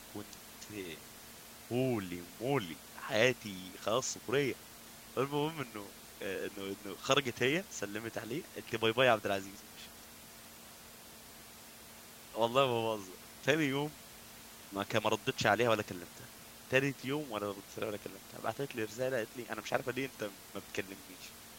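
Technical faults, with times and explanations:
Nothing technical goes wrong anywhere in this speech clip; there's just some room noise sitting about 18 dB below the speech, which belongs to the recording itself.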